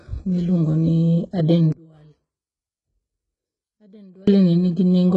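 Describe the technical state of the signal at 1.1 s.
At 1.1 s the speech has gritty, metallic sibilance and a synthetic-sounding treble that stops around 11 kHz. This damage is heavy and runs through the whole clip, so this moment is no exception. The likely cause is HE-AAC compression at a very low rate, consistent with roughly 12 kbps. Only the lower spectrum is coded, and the upper bands are rebuilt by copying lower content upward under a coarse envelope, so the harmonics no longer line up and the s sounds turn lispy.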